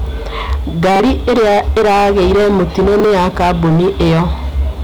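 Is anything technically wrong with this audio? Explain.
Yes. Hard clipping runs throughout the speech: the level is driven about 13 dB past full scale, so nearly a third of samples are flattened, giving a harsh fuzz on every loud passage.

A repeated buffer occurs at 0.96 s and 3.0 s: delivery fell behind, so a 40 ms block replayed once. Each gives a brief stutter with hard joins, and about 40 ms of new audio is lost.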